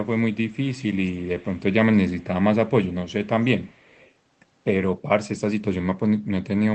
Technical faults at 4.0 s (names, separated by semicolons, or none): echo leak